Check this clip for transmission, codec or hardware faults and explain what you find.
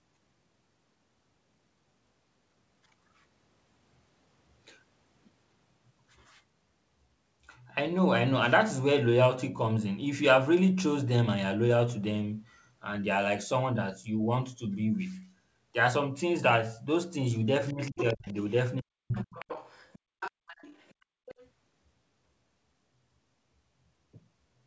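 Yes, there's echo trouble packed into the back end, roughly 17.7 to 21.5 s, while the band stopping at 8 kHz just fits a G.722 call path.

Other side's voice leaking through: a second voice creeps in at 17.68–18.52 s, 19.19–20.94 s and 21.26–21.48 s, fading from around 10 dB under the talker to about 20 dB under. Likely cause: the far end on a loudspeaker, with the echo canceller failing to scrub it from the mic.

Speech suppressed in double talk: at 17.73–18.36 s and 18.8–19.32 s the talker's voice dips hard, roughly 30 dB and then 40 dB at worst, for about 0.4 s and then 0.5 s. Likely both sides are talking at once, and the canceller can't tell them apart, so it ducks everything.

Background gated by the echo canceller: from 20.99 to 21.26 s the room sound drops out by about 33 dB for roughly 300 ms, then comes back. The canceller clamps the mic while the loudspeaker is active and releases it afterwards.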